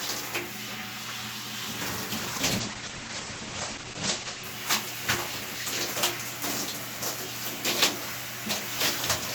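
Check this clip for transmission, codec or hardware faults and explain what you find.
One transmission fault is present: a call bitrate drop between 2.16 s and 4.51 s in this everyday-sound recording. The call's bandwidth estimate collapsed and the Opus encoder was pushed to a far lower rate, which fits a fall from around 64 kbps to roughly 11 kbps, held for about 2.3 s. Coding turns coarse and the audio bandwidth shrinks from 20 kHz to 8 kHz, so the sound becomes muffled and rough, with a watery texture. On a spectrogram, energy above 8 kHz vanishes abruptly across that span. The waveform shows no gap.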